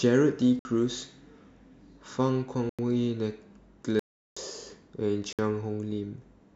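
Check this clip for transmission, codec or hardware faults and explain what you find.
There's one fault here, repeating four times: blocks of digital silence in the speech, at 0.59–0.65 s (58 ms), 2.69–2.79 s (93 ms, which fits a 4096-sample buffer), 3.99–4.37 s (372 ms, fitting a 16384-sample block) and 5.33–5.39 s (60 ms). Each time the audio drops straight to dead silence and back with no fade. The short ones come across as quick holes, and the one near 4 s as a proper gap.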